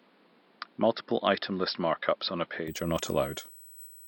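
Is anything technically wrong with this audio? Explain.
Yes, two faults are audible in this speech clip.

USB whine runs through the whole clip. The bus draws current in 125-microsecond microframes, and that ripple leaks through power or ground as a fixed 8 kHz tone, strongest at its 16 kHz multiple, sitting roughly 20 dB beneath the speech as a thin, steady whistle.

An input switched to a poorer device is the likely cause of the dull first stretch, from 0.0 to 2.68 s. Nothing above 5.4 kHz gets through, and a faint noise floor sits roughly 35 dB down. At 2.68 s the sound brightens abruptly, with no gap and no loudness jump.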